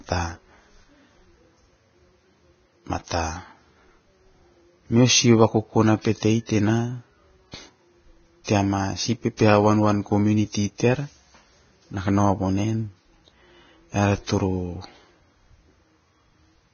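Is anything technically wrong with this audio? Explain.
Yes. There are two faults.

Throughout the clip, the speech sounds hissy and grainy, with nothing above 6.5 kHz. This is likely Vorbis compression at a very low bitrate, around 18 kbps. The treble is quantised so coarsely that fine detail turns into noise.

From 9.37 to 9.39 s, a pre-echo smears one attack. A short hiss of about 22 ms comes just before it. The codec spread noise across its whole block, so noise meant for the loud onset leaked into the quiet moment before.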